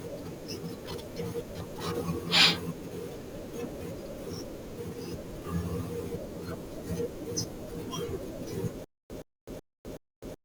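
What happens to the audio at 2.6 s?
Nothing goes wrong at 2.6 s: the speech carries on intact through that moment with no audible dropout, click, distortion or other fault.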